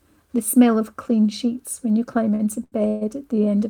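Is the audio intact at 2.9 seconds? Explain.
No. From 2.88 to 3.03 s there is a call audio freeze. The audio stalls and the last sound is stretched into a fading buzz or hiss that never drops to silence. The likely cause is packets held up in transit, which drained the jitter buffer so the receiver had to fill about 132 ms itself. When playback resumes, it picks up where it stopped, with nothing lost, but everything after runs about 132 ms late.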